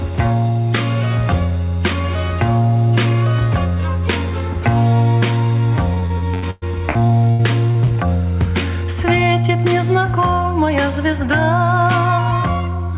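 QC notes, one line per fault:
5.94–7.89 s, repeated packet loss (robotic sound): about eleven holes, the longest 111 ms, each papered over by stretching the last bit of sound, so it turns choppy and robotic.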